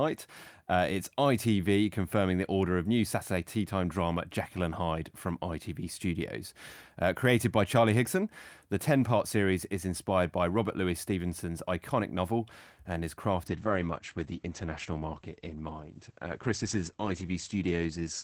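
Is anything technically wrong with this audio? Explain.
Yes. There is a call bitrate drop from 13.48 s to the end of the clip. The bandwidth estimate fell and the encoder coarsened, which fits a fall from about 32 to 10 kbps. Audio bandwidth narrows from 20 kHz to 8 kHz, so the speech turns muffled and rough without recovering.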